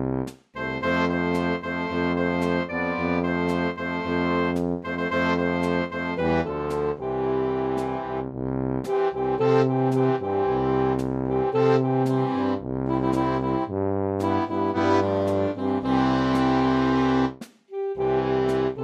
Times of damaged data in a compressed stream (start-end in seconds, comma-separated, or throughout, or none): none